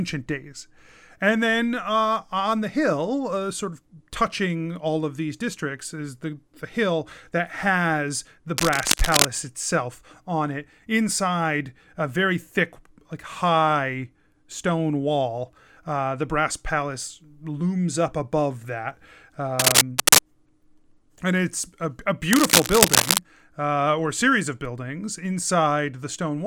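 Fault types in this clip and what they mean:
Cable scratch noise: three short patches of rough, crackly rustling sit right on top of the speech, at 8.57 to 9.27 s, 19.59 to 20.19 s and 22.31 to 23.19 s, each under a second long. The first is roughly as loud as the speech and the later two are a bit louder. The likely cause is a worn cable or connector being nudged so its contact resistance jumps around, spraying uneven bursts of noise into the signal.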